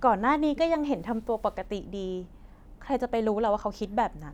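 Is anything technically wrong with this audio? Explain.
No, nothing is technically wrong.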